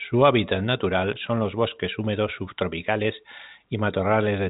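No technical faults can be heard in this speech.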